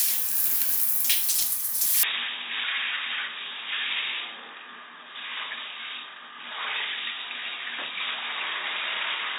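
At 2.03 s the sound abruptly turns dull and boxy, and stays that way to the end. There is no gap at the change. Nothing passes above 3.8 kHz from that point on. The level drops by about 10 dB. A new, faint background noise appears, roughly 40 dB below the signal. The likely cause is the input switched to a poorer device mid-recording, one with a narrower band, its own tone, and its own noise floor.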